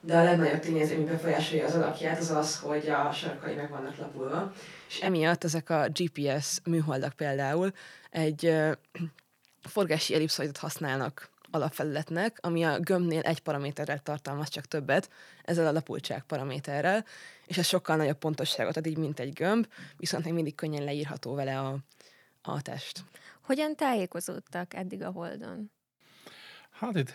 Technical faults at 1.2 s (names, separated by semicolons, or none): switch to a distant microphone